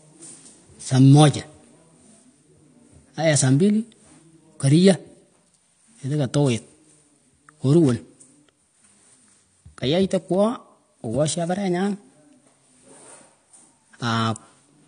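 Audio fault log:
Throughout: AAC compression, likely at a low bitrate that fits about 32 kbps. Nothing gets through above 9.6 kHz, so the speech sounds dull, and the coarsely quantised spectrum leaves plainly audible smearing across the whole clip.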